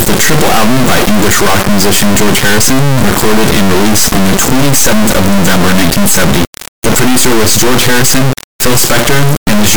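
From start to finish, 32-bit integer samples are being interpreted as 32-bit float, an integer read as float fault. The resulting values are near zero or far beyond full scale, so the speech becomes a harsh, extremely loud buzzing square wave that collapses into silence during very quiet passages.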